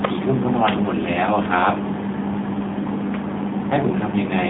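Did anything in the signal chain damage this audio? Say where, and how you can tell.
Yes, at the codec: AMR narrowband mobile codec throughout, with only 150 Hz to 3.7 kHz passing and a buzzy, synthetic edge from sparse-pulse modelling that fits a 7.4 kbps mode.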